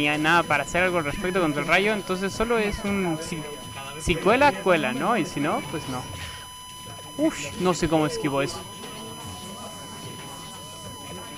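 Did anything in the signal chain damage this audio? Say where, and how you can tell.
Yes. A USB whine sits at a steady 1 kHz for the whole clip, roughly 15 dB below the signal. The USB bus's 1 ms frame current is leaking in through shared power or ground in the analogue wiring. On a spectrogram it shows as an unbroken horizontal line at 1 kHz.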